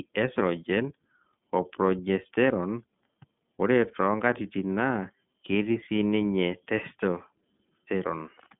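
Throughout, the speech carries iLBC codec damage: a spectrogram is empty above 3.5 kHz, and separately coded 30 ms frames sound rough and synthetic.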